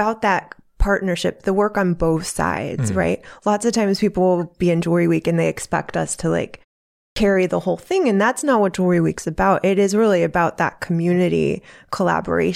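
At 7.11 s the output device, asleep through a 0.55 s pause after "expect us to like", wakes late, a clipped start after a pause that swallows 53 ms before "the whole thing".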